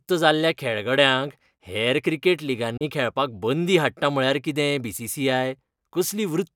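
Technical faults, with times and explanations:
2.77–2.85 s, Bluetooth dropout: audio packets likely missed their delivery window to the headphones, so the speech drops abruptly to silence after "खेळगड्यांक हेर क्रिकेट" and resumes further on at "खेळपाक बंदी हाडटा म्हळ्यार".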